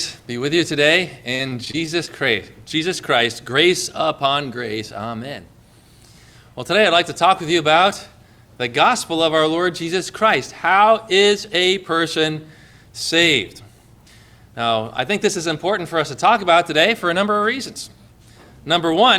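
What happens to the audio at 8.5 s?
Nothing goes wrong at 8.5 s; the audio runs through that moment intact, with no break, glitch or distortion.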